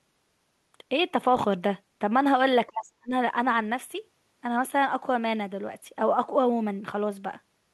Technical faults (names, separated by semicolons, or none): speech suppressed in double talk